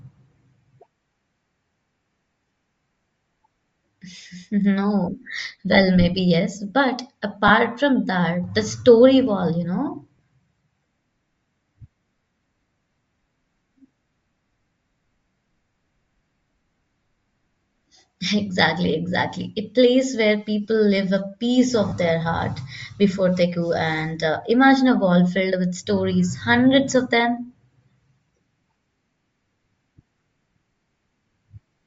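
Throughout the speech, the upper spectrum sounds thin and grainy, with a breathy edge on the voice. The likely cause is Bluetooth LC3 compression at a low rate, which fits about 32 kbps with 10 ms frames. A spectrogram shows patchy noise fill in the top band instead of clear harmonic detail.

Lost LE Audio frames break the sound three times. The first is at 7.48 to 7.51 s, between "maybe yes but" and "from that the story". The second is at 10.16 to 10.19 s, after "you know". The third is at 21.89 to 21.92 s, between "people live a piece" and "their heart before they". Each gap lasts 20 to 30 ms. The decoder repeats the last spectrum with scrambled signs, so the speech briefly turns into a noisy smear. A spectrogram shows a short blurred column, and the waveform shows a rough patch.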